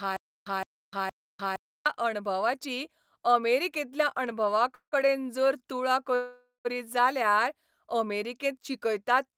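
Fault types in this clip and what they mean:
Stutter with silent gaps: The speech opens already caught in a loop. A 165 ms fragment replays three times at an even period of about 465 ms, each burst followed by roughly 300 ms of digital silence, until normal playback resumes at 1.86 s just before "अणभवाची अमेरिकेंतल्या". The likely cause is a stalled player or stream replaying its last buffered fragment on each retry. The audio that belonged in those gaps is lost.
Call audio freeze: Twice the last sound is held and stretched as it fades, then drops to silence before the speech picks up exactly where it stopped. The first runs from 4.75 to 4.94 s, filling 172 ms with about 100 ms of that silent, just before "जर तुळा". The second runs from 6.15 to 6.67 s, right after "जर तुळा", filling 496 ms with 140 ms silent. The likely cause is delayed packets draining the jitter buffer. Nothing is missing, but each freeze adds its own length to the delay.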